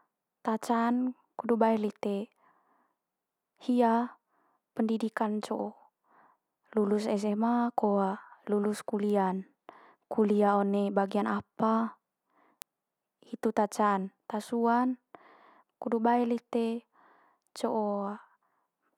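A sharp, isolated tick at 9.10 s (about -29 dBFS) and a louder one at 12.62 s (about -11 dBFS): bit error spikes, where a flipped bit briefly throws a sample far off.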